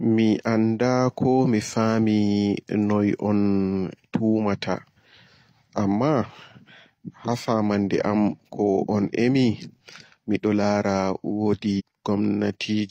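A stream segment likely failed to load and was skipped, so from 11.76 to 11.82 s the speech jumps abruptly ahead with a brief blip.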